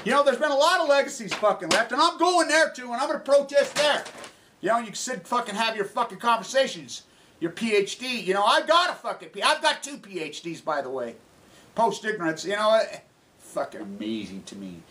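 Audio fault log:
4.06–8.60 s, resampler restarted on every block: a 50 Hz buzz rides on the sound, present only while signal is present. Each 20 ms block was converted from 48 kHz to 44.1 kHz in isolation, leaving a small error at every block edge.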